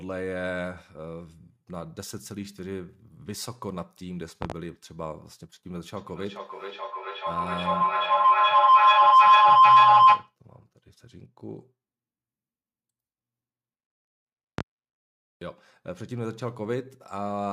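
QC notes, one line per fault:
4.42–4.54 s, loud pop: two sharp pops in quick succession, peaking roughly 25 dB above the surrounding speech, which carries on underneath. This is likely a sudden voltage step or pulse from a plug, switch or static discharge, shaped by the downstream circuitry. On the waveform it shows as a pair of tall, narrow spikes towering over the speech envelope; on a spectrogram, two thin vertical streaks spanning the whole frequency range.
5.97–10.36 s, feedback howl: a tone near 1 kHz builds steadily until it sits about 18 dB above the speech, pulsing roughly every 0.4 s. A second device in the same room feeds the loudspeaker output back into the microphone, and each trip round the loop gains level. The repeats narrow to the frequency the loop favours, and the pulsing follows the loop's delay. On a spectrogram it appears as a bright horizontal band near 1 kHz, thickening and brightening over time and beaded at about 0.4 s intervals. 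The waveform envelope swells well past the speech.
14.58–14.62 s, loud pop: a single sharp pop, roughly 25 dB above the signal, laid over the speech, which continues beneath it. It is likely caused by a brief voltage pulse such as a switch transient or static. The waveform shows one isolated spike far taller than its surroundings, and the spectrogram shows one thin broadband vertical line.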